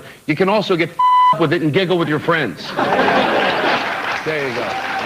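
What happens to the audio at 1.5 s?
Nothing goes wrong at 1.5 s; the audio plays through that moment intact, with no dropout, click or distortion.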